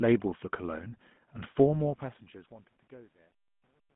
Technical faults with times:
0.00-3.95 GSM full-rate codec
1.60-3.95 truncation distortion on a fade

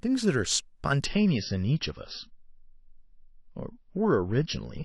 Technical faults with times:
1.06-4.84 adaptive stream at a lower bitrate

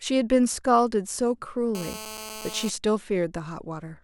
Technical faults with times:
1.75-2.70 GSM phone buzz

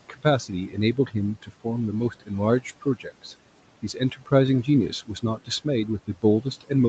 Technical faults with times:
0.00-6.89 noise suppressor artifacts
0.09-1.66 speech cut by the noise suppressor
2.10-3.33 speech cut by the noise suppressor
3.82-4.32 speech cut by the noise suppressor
4.64-6.89 speech cut by the noise suppressor

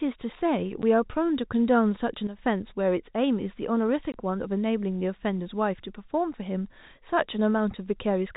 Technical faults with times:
0.82 packet loss filled with silence
2.27-2.39 sudden gain jump
4.12 packet loss filled with silence

